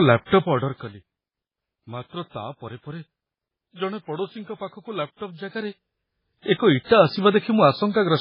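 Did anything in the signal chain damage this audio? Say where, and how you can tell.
Yes, at the codec stage, and it runs through the whole speech clip. There's nothing above about 5.2 kHz, a hard treble ceiling, and the sound is heavily watery and swirly, with s sounds going chirpy and metallic. That points to MP3 compression at a very low bitrate, likely around 16 kbps. Starved of bits, the encoder chops the top band off and drops weak frequency lines frame by frame, which causes that flickering texture.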